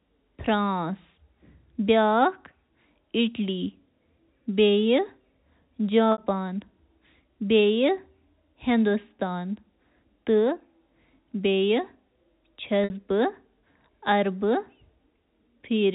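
At 6.12 s and again at 12.84 s the speech suffers packet loss with pitch repetition. Each time about 60 ms of audio never arrives, which fits three 20 ms packets, and the receiver fills the hole by looping the last pitch period while fading it down. The gap briefly sounds like a held, buzzy tone that dies away before the speech cross-fades back in, heard through the narrow 4 kHz G.711 telephone band.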